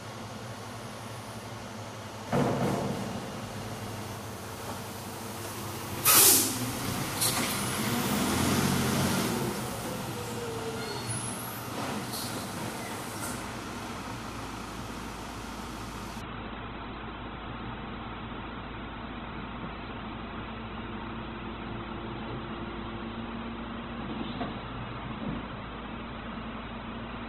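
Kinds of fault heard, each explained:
Doubled audio track: From 2.27 to 4.17 s a second full-band copy of the sound runs about a third of a second behind, roughly 5 dB quieter, likely from a duplicated capture path. A waveform shows each transient repeated at that fixed offset, with abrupt onset and cutoff.
Adaptive stream at a lower bitrate: At 16.2 s the quality drops suddenly, with no gap, to a much lower-bitrate version that holds until the end. Treble vanishes above 4.1 kHz and codec artefacts thicken. A spectrogram shows a hard horizontal ceiling switching on instantly there.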